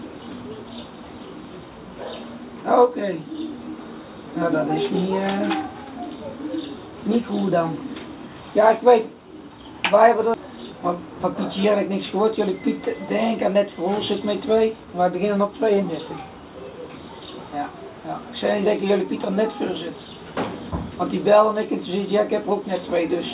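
At 10.34 to 10.36 s the sound jumps abruptly forward with no gap or fill, as though about a second of material had been cut out and the two sides spliced together. This is a skip ahead: a block of audio was discarded, either lost in transit or dropped by the jitter buffer when it overflowed with later audio already queued, so playback resumed from the newer material and the receiving end's delay fell by roughly a second.

Immediately afterwards, from 10.47 to 12.51 s, the sound runs slightly fast, at about 104% of normal speed, while its pitch stays unchanged. This is a jitter buffer speed-up. The buffer was still holding more audio than its target, so the receiver repeatedly trimmed tiny slices of one or a few pitch periods to catch up, removing about a tenth of a second in total. Throughout, the telephone-band G.711 mu-law path leaves nothing above 4 kHz.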